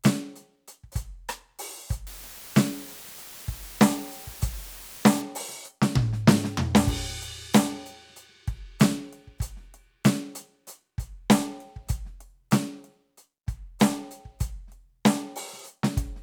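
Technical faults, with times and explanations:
2.07–5.22 s, low bit depth with dither: a steady, even hiss sits under the music, roughly 20 dB below it, with no gritty distortion. The music drops to 7 bits, and dither added before rounding turns the coarse rounding error into constant white noise.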